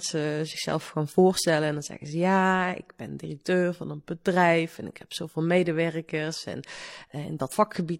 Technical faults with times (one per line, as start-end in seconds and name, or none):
7.48-7.53 damaged data in a compressed stream